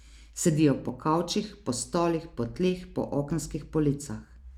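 At 0.89 s, just before "po kavčih po stolih", at 1.81 s between "po kavčih po" and "stolih po tleh po", and at 3.31 s right after "stolih po tleh po", the speech drops into a block of digital silence lasting about 1.5, 2.2 and 2.7 ms. Samples were zeroed with no fade, which points to an output buffer not filled in time. Each gap is heard as a tick or dip. The waveform shows a flat line near zero with abrupt edges, and the spectrogram shows a thin vertical broadband stripe.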